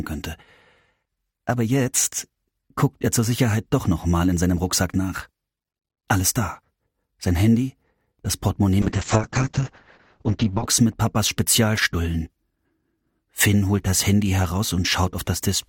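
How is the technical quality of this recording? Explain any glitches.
One clear glitch: a call bitrate drop from 8.83 to 10.73 s. The call's bandwidth estimate fell, so the encoder coded the audio far more coarsely. The sound points to a fall from around 96 kbps to about 7 kbps, held for 1.84 s. The top end narrows from 20 kHz to 8 kHz, so the sound turns muffled and rough. On a spectrogram everything above 8 kHz vanishes abruptly across that span.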